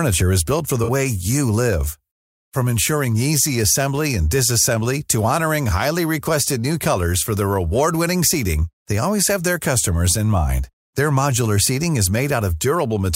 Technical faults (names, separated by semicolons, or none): AAC frame loss with concealment